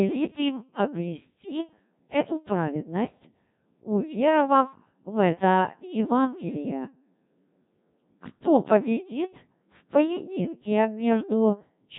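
Throughout, the speech has been carried by the Codec 2 vocoder at a very low rate, consistent with 1.3 kbit/s, so the decoder rebuilds it from sine waves using only pitch, voicing and envelope. It sounds heavily robotic and buzzy, with nothing above 3.8 kHz.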